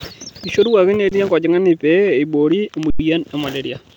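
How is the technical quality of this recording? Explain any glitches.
The speech has two brief freezes where the sound stalls on a flat, steady level and then carries on. Both are an underrun with held sample, in which the output buffer ran dry and the converter held its last value until data arrived. Little or nothing seems lost, so each resumes softly.

At 1.09 to 1.12 s, a 22 ms stall cuts the sound without a sharp click. At 2.90 to 2.99 s, a longer 93 ms hold stalls the sound. It lasts 4096 samples.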